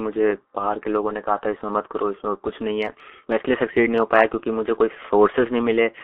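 From start to finish the speech carries heavy G.723.1 codec damage. The line band runs from 300 Hz to 3.4 kHz, and the coding, which fits a rate of about 6.3 kbit/s with a slowly updated voice model, leaves it muffled and hoarse with blurred consonants.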